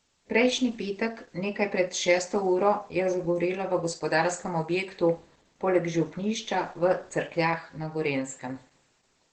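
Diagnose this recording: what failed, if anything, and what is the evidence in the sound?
The failure is at the codec stage, and it runs the whole length of the speech. Everything sounds muffled and hoarse, with the top end stopping around 8 kHz. That fits Opus compression dropped into its speech (SILK) mode at a low rate, likely somewhere near 12 kbps. At that rate the encoder models the voice coarsely and discards the upper band, so the damage here is heavy.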